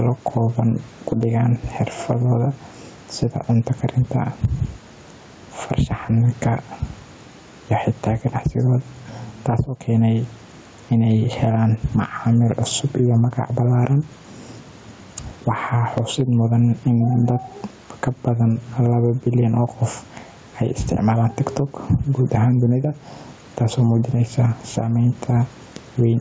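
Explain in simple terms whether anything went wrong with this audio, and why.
Throughout the recording, the level keeps getting pulled down on loud sounds. Loud and quiet moments end up too close together, giving the speech a squashed, flattened feel. This is gain pumping, likely caused by the microphone level being set far too high while a fast limiter keeps yanking it back down on each loud sound.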